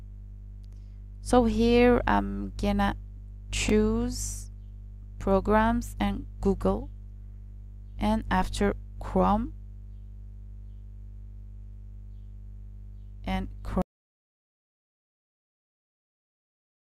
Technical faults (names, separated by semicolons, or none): overlapping chunks